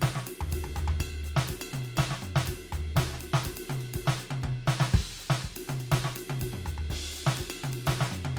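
No faults in this music.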